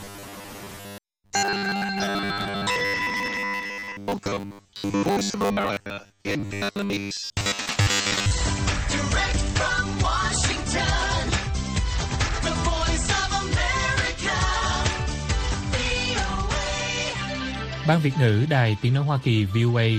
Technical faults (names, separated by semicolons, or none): robotic sound from repeated short buffers